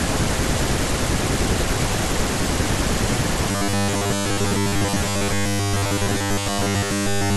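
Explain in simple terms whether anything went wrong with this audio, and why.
Robotic sound from repeated short buffers starts at 3.51 s and lasts until the end of the clip. From there the speech turns into a stiff, metallic buzz at a fixed 100 Hz, which fits a loop about 10 ms long. The likely cause is new audio arriving too slowly, so the playback kept filling the gaps by replaying its last tiny slice. For most of that stretch you hear these repeats instead of the real speech.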